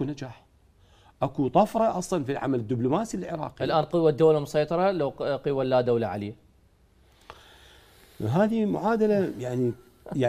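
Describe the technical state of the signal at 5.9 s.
At 5.9 s the audio is intact, with no dropout, distortion or other technical fault audible at that moment.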